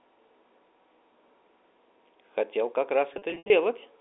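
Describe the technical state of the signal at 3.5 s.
At 3.5 s the packet loss with pitch repetition from 3.14 to 3.50 s is just ending. The receiver repeated the last pitch period to bridge about 200 ms of scattered gaps, producing a held, buzzy tone rather than plain silent dropouts; the longest 80 ms gap fades toward silence.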